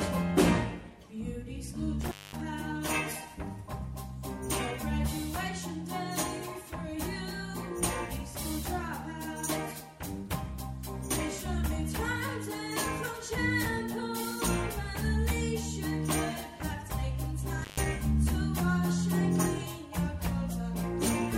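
Intermittent contact at 2.01 to 2.41 s and again at 17.56 to 17.86 s: a loose cable or plug briefly loses its connection, so the signal path opens. Each time the sound drops out, with crackle at the edges as the contact breaks and remakes. Faint hiss fills the gap. The first break holds open for about 0.22 s, and the second, shorter one for about 0.13 s.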